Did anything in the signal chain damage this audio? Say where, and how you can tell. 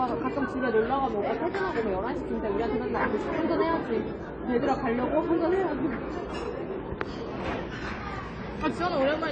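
Yes, at the codec stage: it sounds like AAC compression, likely AAC-LC at a low bitrate, around 24 kbps. It runs the whole clip, and the damage is plainly audible. Nothing survives above about 9 kHz, so the top end sounds dull and closed in, and sustained parts have that smeared, warbly texture. The encoder is short of bits, so it drops the cut-off and coarsely quantises what's left, leaving holes in the spectrum.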